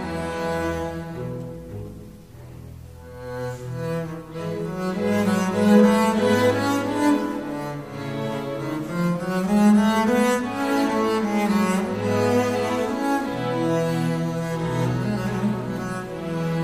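No technical faults can be heard anywhere here.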